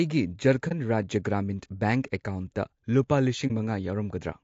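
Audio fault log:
Throughout: low-delay AAC compression. The speech is rough and grainy, with plainly audible noise filling the gaps between the harmonics and a top band that sounds thin and somewhat synthetic. The likely cause is AAC-ELD, the low-delay coder of video calls, running at a rate that fits about 32 kbps. Its very short frames resolve pitch harmonics coarsely and spend bits inefficiently, so at this rate the upper spectrum is only roughly rebuilt.
0.68–0.72 s and 3.47–3.51 s: AAC frame loss with muting. At each point the speech briefly drops out for roughly 40 ms and then returns, which fits a single lost frame whose spectrum the decoder replaced with silence. Because neighbouring frames overlap through their windows, the sound fades down into each gap and back up out of it rather than cutting off abruptly. Each hole therefore has soft edges.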